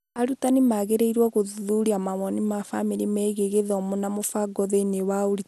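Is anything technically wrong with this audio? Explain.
Yes. Throughout the speech, nothing sounds above about 12.2 kHz, and the damage is plainly audible. This is likely MP2 compression at a low bitrate, near 80 kbps. Starved upper sub-bands drop out, and the rest are coarsely quantised. The result is dull and gurgling.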